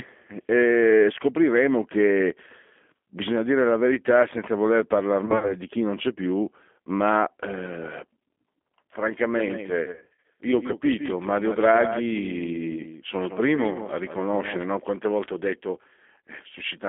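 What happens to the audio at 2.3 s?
At 2.3 s, as throughout, G.729 codec coding at what sounds like 8 kbit/s rebuilds the speech from a vocal tract model, leaving it rough and synthetic-sounding, band-limited to roughly 250 Hz to 3.4 kHz.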